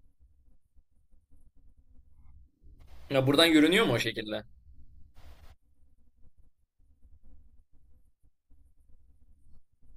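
Listening to this speech recording, nothing technical stood out at any point.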